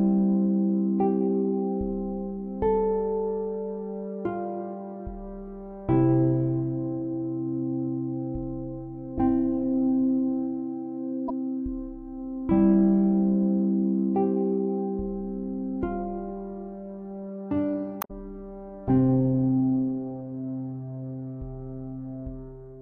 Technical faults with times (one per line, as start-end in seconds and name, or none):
11.28-11.30 damaged data in a compressed stream
17.99-18.11 damaged data in a compressed stream